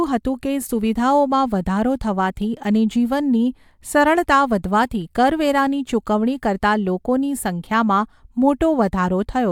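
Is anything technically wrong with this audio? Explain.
No, nothing technically wrong can be heard here.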